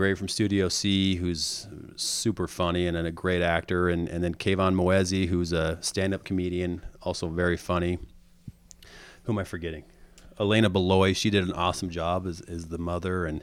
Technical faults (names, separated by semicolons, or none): none